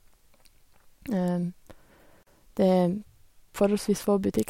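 Separately encoded pieces of this speech were joined without trimming the encoder's start-up delay and end padding, leaving a gap at a join of encoded pieces from 2.23 to 2.27 s. The speech drops out for 38 ms with smeared edges, then resumes exactly where it stopped.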